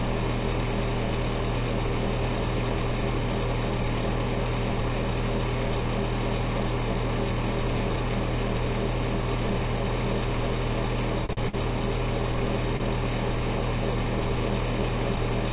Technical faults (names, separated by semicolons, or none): short stall from a late packet; short concealed packet loss